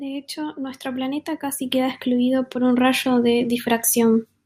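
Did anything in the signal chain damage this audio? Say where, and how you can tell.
No, nothing along the chain, from capture through to playback, leaves an audible mark on this speech.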